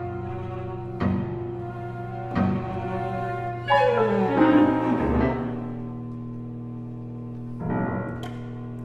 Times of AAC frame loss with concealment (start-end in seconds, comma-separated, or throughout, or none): none